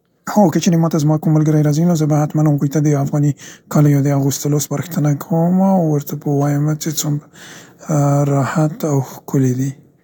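From the start of the clip to 4.88 s the speech runs at about 1.58 times its natural pace with the pitch unchanged, a time-stretched section. The delivery sounds rushed, as short slices of the waveform have been dropped to compress the passage while holding pitch. This is likely the result of software squeezing the segment to fit a shorter duration. Normal pace returns abruptly at "کومه او ورته".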